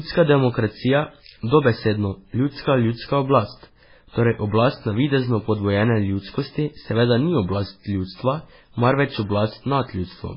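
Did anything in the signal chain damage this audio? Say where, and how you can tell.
Yes, at the codec stage: heavy MP3 compression, likely at a very low bitrate near 16 kbps, runs throughout. The speech has nothing above 5.3 kHz, sounds watery and swirly as weak frequency lines flicker between frames, and s sounds turn metallic, with attacks smeared.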